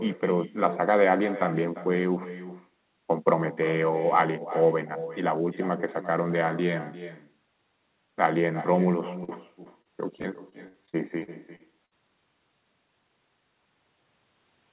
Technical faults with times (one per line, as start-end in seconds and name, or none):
0.00-14.73 echo with no canceller
9.24-11.93 repeated packet loss (robotic sound)